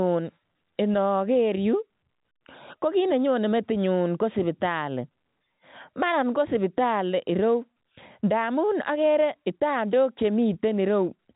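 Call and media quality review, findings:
No faults; G.711 telephone band, top near 3.8 kHz.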